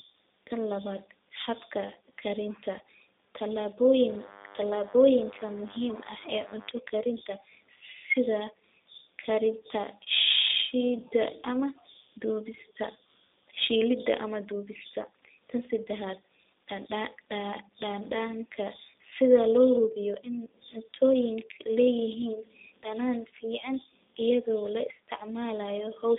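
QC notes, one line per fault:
Throughout: G.729 codec. The whole clip carries plainly audible codec damage, consistent with the G.729A variant at 8 kbit/s. Nothing reaches above 3.8 kHz, and the line band sits between 250 Hz and 3.7 kHz. Each 10 ms frame is rebuilt from a vocal tract model, a pitch predictor and a few pulses. The speech therefore sounds thin, slightly rough and synthetic.
4.08 to 6.72 s: DECT cordless phone buzz. A thin, steady buzz sits under the speech, roughly 25 dB below it. It repeats at 100 Hz and has many harmonics. A nearby DECT handset or base sends a radio burst every 10 ms. The audio circuit rectifies those bursts into sound.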